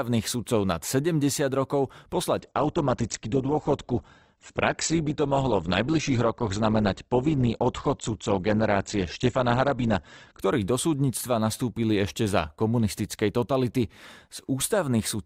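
At 2.40 s, just before "do súdnictva nastúpili ešte", the speech switches abruptly, with no gap, to an adaptive stream at a lower bitrate. Nothing sounds above 8.2 kHz, which points to a drop from 64 to 12 kbit/s Opus. Quality returns at 10.40 s.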